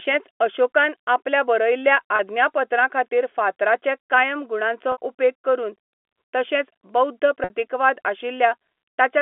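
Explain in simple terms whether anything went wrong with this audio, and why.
Packet loss with pitch repetition happens three times: at 2.16 to 2.19 s, right after "अशोकान आपल्या बरयल्ल्या"; at 4.92 to 4.98 s, just before "उपेग करून"; and at 7.44 to 7.50 s, after "तशेंच बौध्द". Bits of the call never arrived, about 30 ms the first time and 60 ms the other two. The receiver filled each hole by repeating the last pitch cycle, so you hear a brief held, buzzy tone over the ordinary telephone sound.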